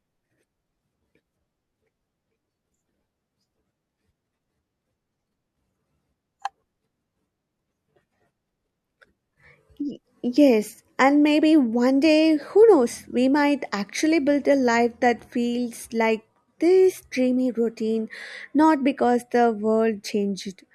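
No technical faults detected.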